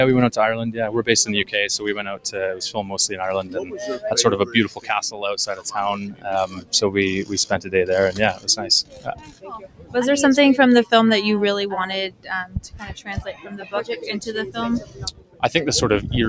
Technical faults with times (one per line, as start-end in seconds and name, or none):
0.00-16.29 noise suppressor applied to music or sounds
2.00-2.30 sound cut by the noise suppressor
2.78-3.78 sound cut by the noise suppressor
4.44-5.66 sound cut by the noise suppressor
6.10-6.73 sound cut by the noise suppressor
8.83-9.95 sound cut by the noise suppressor
12.10-13.73 sound cut by the noise suppressor
14.80-15.43 sound cut by the noise suppressor